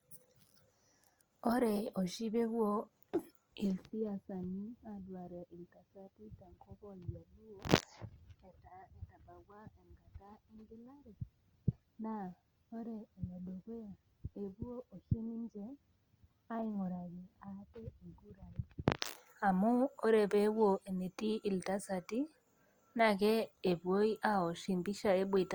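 The speech carries low-bitrate coding smear throughout despite extending to 20.2 kHz: likely low-bitrate audio saved at a high bitrate, fitting 32 kbit/s Opus inside MP3.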